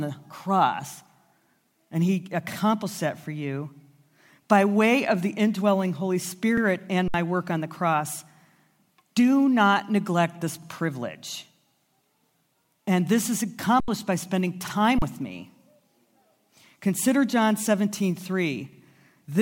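At 6.57 s, 50 ms of speech plays twice. This is overlapping chunks: each 4-second chunk starts before the previous one ends, so the join repeats audio. It sounds like a brief stutter, and it recurs at 10.62 s, just after "do not neglect this".

At 7.08 s, an underrun with held sample flattens the waveform for 60 ms before "work on the cross". The buffer ran dry and the converter froze its last value. Sound stops almost silently. About 70 ms went missing. It recurs at 13.80 s for 80 ms, between "this is" and "by spending", and at 14.99 s for 35 ms with roughly 30 ms lost.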